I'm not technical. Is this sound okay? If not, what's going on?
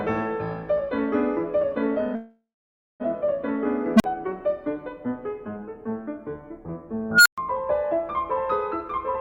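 No, it isn't. From 2.15 to 3.02 s the music stalls. The last sound hangs on as a fading buzz or hiss, then goes quiet for about half a second. This is a call audio freeze, likely from delayed data. Afterwards the music resumes where it stopped, with nothing lost.

There are also two bursts from an unstable filter. At 3.96 s a low beep, around 200 Hz, swells very loudly in about 44 ms, then cuts to 40 ms of silence. At 7.11 s a high squeal, around 1.5 kHz, grows for about 140 ms, then goes silent for 120 ms.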